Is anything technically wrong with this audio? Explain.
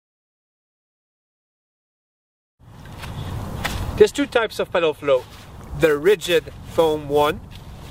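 Yes. From 5.17 s to the end, sample clock jitter appears. The converter's clock wanders by around 10 microseconds, so samples land early or late, giving a rough hiss roughly 25 dB below the signal. Unlike a steady noise floor, it swells on loud, bright passages and disappears in silence.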